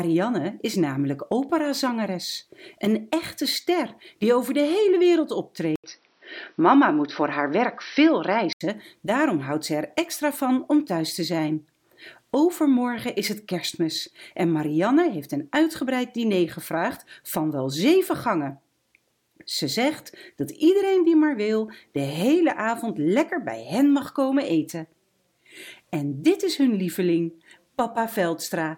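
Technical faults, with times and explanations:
5.76–8.61 s, input switched to a poorer device: after an 80 ms gap the sound turns dull and boxy, with nothing above 5.9 kHz, a level shift of around 5 dB and a faint new background hiss, likely a narrower-band microphone briefly taking over.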